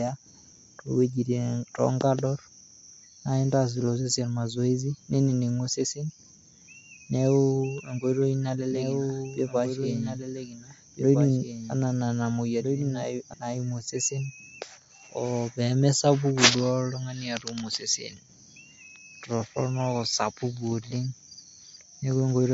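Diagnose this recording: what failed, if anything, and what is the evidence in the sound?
MP3 compression runs through the whole recording and is plainly audible, pointing to the codec stage. Nothing survives above 7.6 kHz, a fixed treble cut-off, and the speech has the watery, swirling quality of weak frequency lines switching on and off from frame to frame, with smeared attacks and chirpy sibilants. The likely cause is an MP3 encode at a low bitrate, fitting something around 48 kbps, where the encoder ran short of bits and discarded detail.

A doubled audio track appears from 8.70 to 13.34 s. A second full-band copy of the speech trails the original by about one and a half seconds, roughly 5 dB quieter, with no decay or room colour, and it switches in and out abruptly at those times. The likely mechanism is the same audio mixed in twice, either captured again through a slower path in the driver or buffer chain or held out of step by an edit, which leaves a fixed-offset duplicate rather than an acoustic echo.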